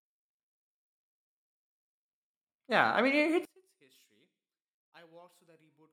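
One channel inverted from 3.45 s to the end: speech falls about 32 dB, likely because one side's reversed polarity cancels the shared centre.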